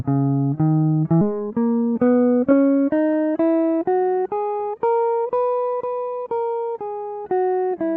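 At 1.21 to 1.23 s the music makes a skip ahead. Around a second of audio was discarded and playback jumps straight to later material with no fill. On a waveform the two sides butt together abruptly, and a spectrogram shows a hard vertical seam where the content changes.

From 1.30 to 4.17 s a jitter buffer speed-up follows. The receiver trimmed short pitch-period slices repeatedly, removing about a third of a second, so the music runs roughly 11% faster at unchanged pitch and the tempo feels rushed. A spectrogram shows harmonics at unchanged heights but compressed in time, with the waveform's repeating cycles keeping their length but fewer of them. Above 8 kHz the spectrogram stays empty throughout, consistent with the Opus call codec's band limit.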